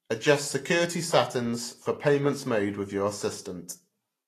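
Throughout the speech, the treble stops at about 14.2 kHz, and the upper band sounds hissy and grainy, with softened consonant attacks. That points to a low bitrate, likely Vorbis compression. Unlike a plain low-pass, the band below the cut-off is still filled, but with noisy texture in place of fine detail.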